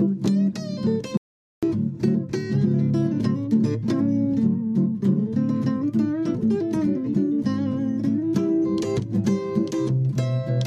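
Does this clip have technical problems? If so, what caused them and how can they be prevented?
Yes: an audio dropout to silence from 1.17 to 1.63 s, about 450 ms of silence, likely a lost input link. Secure cables and monitor input levels.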